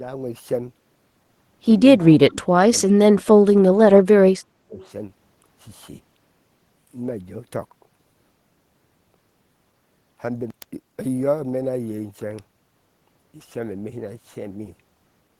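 Echo leak, 2.00 to 2.05 s: a faint copy of the speech returns about 300 ms late, about 25 dB down, likely an echo canceller passing residual loudspeaker pickup.

Speech suppressed in double talk, 2.07 to 2.74 s and 2.93 to 4.85 s: the speech dips in pieces by up to about 25 dB, then about 35 dB, likely the canceller muting both overlapping talkers.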